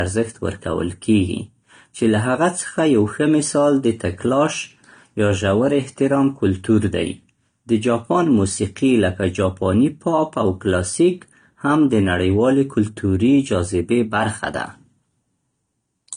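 From start to finish, the speech has nothing above 9.7 kHz, a hard ceiling far below what a 320 kbit/s MP3 would normally keep. That mismatch identifies low-bitrate audio saved at a high bitrate: the sound was likely encoded first at a low bitrate, around 32 kbit/s AAC, then re-saved as high-bitrate MP3, which cannot restore the missing band. Unlike a simple low-pass filter, the first codec's own artefacts also remain in the sound.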